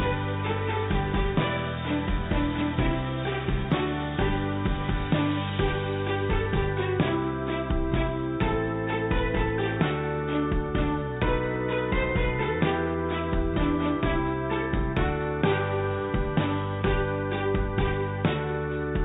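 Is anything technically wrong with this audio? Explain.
No, nothing in this recording signals a technical problem, and the signal holds steady throughout.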